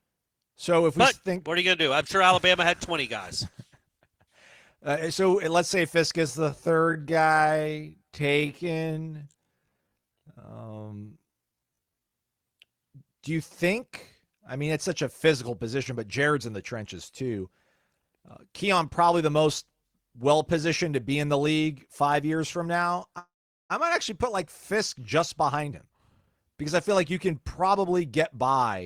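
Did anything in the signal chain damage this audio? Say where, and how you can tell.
Yes. From 6.25 to 12.13 s the speech runs at about 0.57 times normal pace with pitch unchanged: a time-stretched section, likely from software stretching.

From 23.18 to 23.72 s there is a call audio freeze: a fading buzz or hiss, then about 420 ms of silence. The likely cause is network delay emptying the jitter buffer, which inserted a gap without losing anything.

From 25.38 to 28.47 s a jitter buffer speed-up plays speech at 116% speed and the same pitch, trimming roughly half a second to cut accumulated delay.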